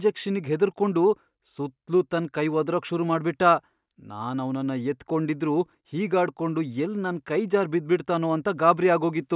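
No technical faults can be heard anywhere in the speech recording: the signal stays continuous and steady, with nothing breaking into or degrading it along the way.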